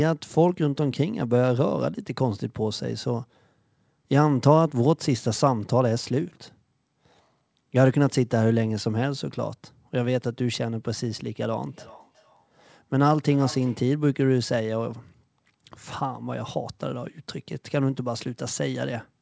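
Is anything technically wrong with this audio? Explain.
Yes, there's a feedback echo between two devices from 11.66 to 13.85 s. Two devices in the same room seem to be on the call together: one plays back what the other's microphone sent, and that microphone catches it again. Each echo canceller only removes its own device's output, so nothing stops the loop. You hear the speech come back at a steady interval of roughly 400 ms, thin and ringy, peaking about 23 dB below the direct speech.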